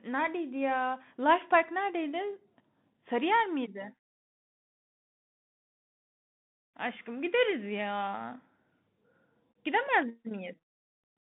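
Speech runs through a Bluetooth CVSD headset codec for its whole length. The band sits near 150 Hz to 3.6 kHz, with nothing above 3.8 kHz. Each sample is coded as a single up-or-down step, which fits a 64 kbps link. The damage is plainly audible: grainy hiss, scratchy s sounds and distortion on loud high-frequency sounds.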